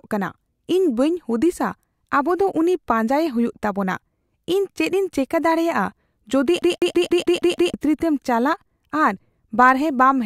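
From 6.62 s to 7.74 s the speech gets caught in a CD stuck on one turn: a scratch keeps bouncing the laser back a track, so the same 0.16 s slice plays seven times over, with a tiny mute at each jump, giving that fast, even skipping-disc stutter.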